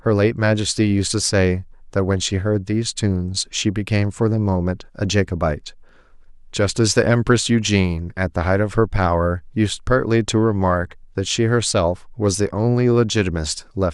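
At 10.82 s there's a corrupt frame decoded: one damaged compressed frame got played anyway, throwing energy into the wrong frequencies as a short blip peaking around -20 dBFS.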